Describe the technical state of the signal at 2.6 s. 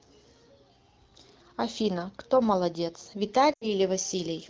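At 2.6 s the speech comes through intact, carried by the AMR wideband (HD Voice) codec at 12.65 kbit/s with nothing more than its light coding character and no fault present.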